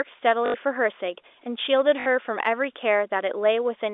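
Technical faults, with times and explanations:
0.46 to 0.54 s, packet loss with last packet repeated: about 80 ms of audio goes missing and the receiver fills the gap by replaying its last packet over and over. The loops don't line up with the pitch, and the run turns into a short robotic stutter buzzing near 50 Hz, which fits 20 ms packets.
2.0 to 2.06 s, packet loss with last packet repeated: the same repeat-fill, shorter at about 60 ms, with the same buzz heard through the narrow 300 to 3600 Hz telephone band of the G.711 line.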